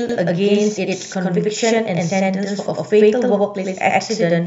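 From start to end the speech carries a channel delay (doubling). One channel runs about 93 ms behind the other, which fits a 4096-sample buffer, and the two are summed to mono, so every syllable is followed by an equally loud copy, heard as a slap echo or doubled voice. On the waveform each onset appears twice, 93 ms apart. On the spectrogram every burst repeats as a matching shadow offset in time.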